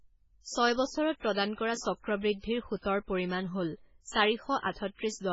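From start to finish the speech sounds watery and swirly, with a dull, boxed-in top end because nothing reaches above about 7.7 kHz. These are the marks of heavy MP3 compression, most likely from a very low bitrate, around 16 kbps. Short of bits, the encoder chops off the treble at a fixed point and discards quieter frequency detail, which flickers in and out between frames and produces the unstable, bubbling texture.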